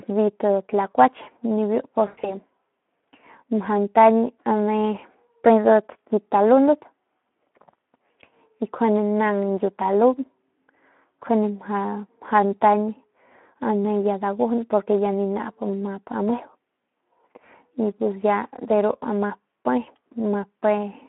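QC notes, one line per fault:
Throughout: Speex codec. The speech sounds hoarse and noisy, with plainly audible coding damage and no content above 3.4 kHz or below 200 Hz. A low-rate CELP coder, around 11 kbps, has too few bits to model the excitation faithfully, so the harmonic detail degrades into grainy noise.
2.07–2.34 s: VoIP packet loss concealed by the speech codec. The speech smears into a fading tone or noise, then stays weak or distorted for tens of milliseconds or more before recovering. About 120 ms of audio went missing across a 160 ms stretch, the longest gap 100 ms. The decoder stretched its last pitch and filter, lowering the gain each frame.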